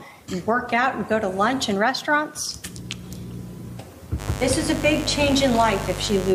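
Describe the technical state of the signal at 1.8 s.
At 1.8 s the signal is intact, with no fault to be heard at that moment.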